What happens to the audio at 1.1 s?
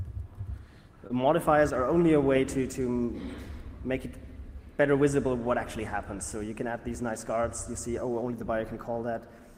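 Between 1.07 and 1.12 s there is short concealed packet loss. About 20 ms of audio never reached the decoder in time, so the receiver extended the preceding sound to cover roughly 22 ms, then crossfaded back into the real signal, leaving a brief smear.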